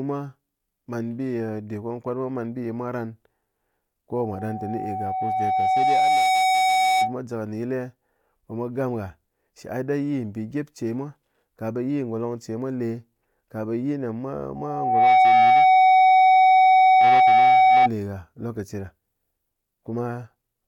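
A speech clip with two bursts of loudspeaker feedback squeal. The first runs from 4.16 to 7.17 s. A tone near 752 Hz swells over roughly two seconds to about 10 dB above the speech. The second follows "ne mwa" and lasts from 14.55 to 17.89 s. It builds faster, in about half a second, and peaks near 15 dB above the speech. A microphone is hearing its own loudspeaker, and at 752 Hz the loop gain exceeds one.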